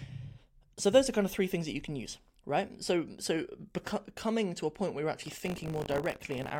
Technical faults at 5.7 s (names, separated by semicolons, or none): buffer tearing